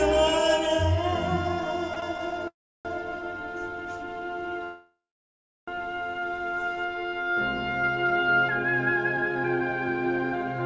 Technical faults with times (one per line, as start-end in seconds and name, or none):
1.94-2.04 short stall from a late packet
2.48-2.87 call audio freeze
4.64-5.69 call audio freeze